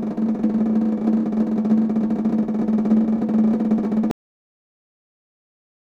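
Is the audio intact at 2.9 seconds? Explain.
Yes, the music plays through 2.9 seconds intact, with no dropout, click, distortion or other fault at that moment.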